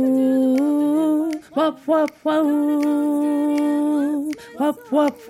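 No technical faults occur at any point in the clip, so there is nothing to describe in time order.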